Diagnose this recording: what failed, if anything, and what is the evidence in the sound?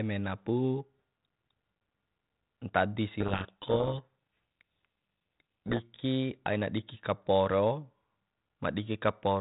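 The codec stage failed: a codec payload misread from 3.20 to 5.80 s buries the speech in harsh, gritty distortion. The 32 kbit/s G.726 stream is intact, but the decoder takes each code word with its bits in reversed order, producing wrong difference values until packing agrees again.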